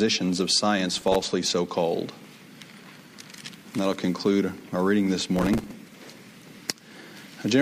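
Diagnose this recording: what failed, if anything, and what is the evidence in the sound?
The fault is processor overload crackle at the driver or buffer stage, heard as two bursts of gritty tearing from 0.94 to 1.31 s and from 5.36 to 5.72 s. Each burst sounds like many missed buffer deadlines in a row, with stale audio replayed in place of fresh samples. The rapid grain suggests buffers of a few milliseconds. The waveform would show jagged steps and repeated fragments, and a spectrogram would show broadband vertical streaks that stop when the load clears.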